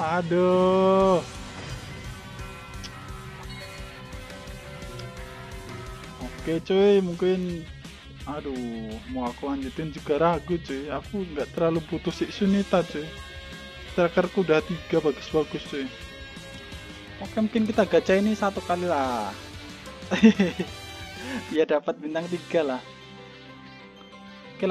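From the start to 17.23 s, the playback chain runs the samples at a slower clock than the one they were captured at, with no rate conversion: a wrong sample rate. The slowdown fits audio recorded at 48 kHz being played at 44.1 kHz. Everything in that stretch runs at 0.919 times normal speed and sits about 1.47 semitones flat, so the sound comes across as lower, heavier and slightly dragged.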